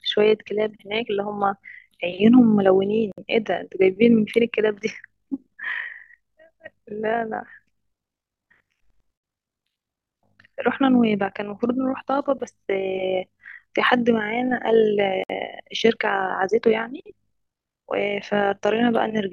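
Right from the start and running the whole way through, the speech has overlap-add ripple. The audio was chopped into windowed frames and stitched back together with an overlap that doesn't add up to a steady gain, so the level swings by about 6 dB once per frame, somewhere around 50 times a second. You hear it as a buzzy, robotic flutter riding on everything.

On top of that, there's a gap at a join of encoded pieces at 3.12 s, 9.18 s and 15.24 s, roughly six seconds apart, which tells you the audio was encoded in six-second chunks and glued together without trimming. Each gap lasts about 59 ms, made up of the encoder's start-up delay and the padding on the previous chunk's last frame. The speech drops out with a hole whose edges are smeared by the codec, then resumes right where it left off.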